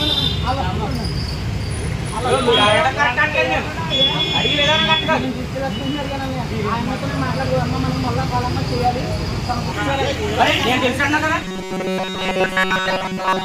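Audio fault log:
11.43 to 13.45 s, robotic sound from repeated short buffers: the audio collapses into a rigid, metallic buzz at 188 Hz that holds to the end of the clip, loosely tracing the shape of the sound underneath. The likely cause is new audio arriving too seldom, so playback loops a tiny slice of about 5.3 ms, one cycle of that pitch, over and over, with essentially none of the real audio getting through.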